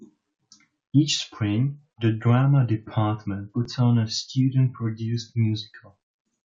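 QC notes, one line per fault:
3.65 s, underrun with held sample: the output buffer ran dry and the converter held its last value, so the speech flattens for about 5 ms, a 256-sample gap. Live audio was lost, so it resumes just before "on a".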